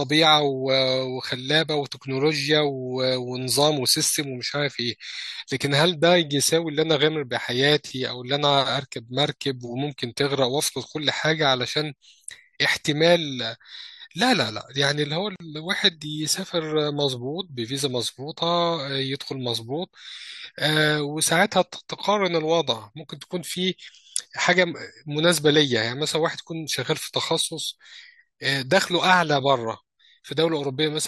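At 15.36 s the speech shows a gap at a join of encoded pieces: two separately encoded sections were spliced without trimming encoder delay and end padding. That leaves a silence of about 43 ms, to 15.40 s, with smeared edges, before the speech resumes where it stopped.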